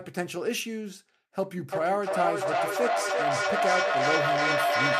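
From 1.7 s to the end of the clip, a feedback echo between two devices takes over the speech. Each phrase returns at an interval of roughly a third of a second, thinner and more ringing with each pass. The loop is strong enough that the repeats build rather than decay, peaking about 2 dB above the direct speech. A second device in the same room is playing the call back into an open microphone, and neither echo canceller removes the other device's playback.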